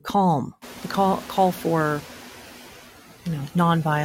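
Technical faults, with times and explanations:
throughout: noise suppressor artifacts. The suppressor lowers the noise by about 7 dB, frame by frame. It judges each frequency band separately. So the noise dips in the gaps between words and swells back up underneath the speech.
0.61 to 2.12 s: noise suppressor catching up. The room noise jumps by about 24 dB at roughly half a second. The suppressor's noise estimate lags, so the louder noise passes through with less reduction. Over about 1.5 s it adapts, and the noise sinks by about 5 dB. The room noise itself is part of the recording and sits about 18 dB below the speech after the rise.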